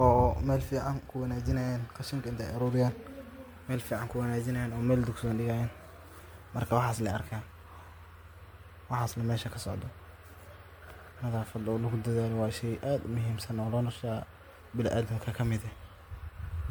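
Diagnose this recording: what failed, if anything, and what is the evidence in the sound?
Throughout the clip the speech sounds swirly and hollow, with a smeared, watery texture and consonant attacks that blur instead of landing cleanly. The damage is heavier than one lossy pass would leave, and the stage is the codec: this is generation loss, likely from about seven successive MP3 encodes, which fits a rate near 96 kbit/s. Each re-encode quantises on a shifted frame grid, so noise and spectral holes accumulate.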